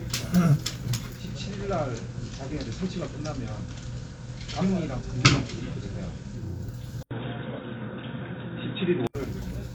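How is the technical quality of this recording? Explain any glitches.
The quality is uneven, with two distinct glitches in the middle and toward the end.

From 1.06 to 6.68 s there's a digital radio blending to analogue: the receiver lost its digital stream and faded over about 363 ms to the FM version. The level dips about 1 dB, and hiss sits roughly 30 dB down.

From 7.03 to 9.15 s the input is switched to a poorer device, likely a change of microphone or headset profile. You get an 80 ms dropout, then boxy audio, a level jump of around 5 dB, and fresh background noise roughly 35 dB below the signal.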